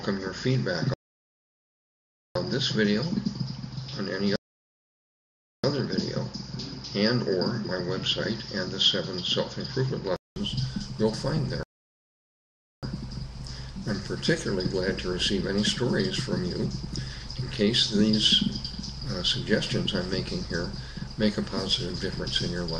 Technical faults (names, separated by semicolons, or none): input switched to a poorer device; rebuffering stall